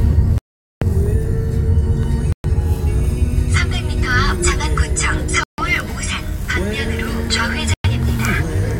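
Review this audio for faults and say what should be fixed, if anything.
The audio drops to dead silence four times, at 0.38–0.82 s (about 434 ms), 2.32–2.44 s, 5.43–5.58 s and 7.74–7.85 s (roughly 105–150 ms each), then resumes. That's likely a Bluetooth stall: interference delayed packets, the headphone buffer emptied, and playback waited for resends. To prevent it, record or monitor over a wired connection, or cut down 2.4 GHz interference and keep the devices close.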